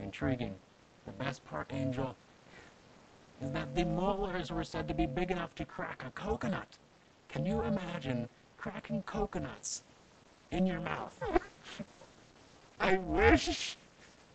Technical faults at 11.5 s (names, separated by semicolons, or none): overlap-add ripple; call bitrate drop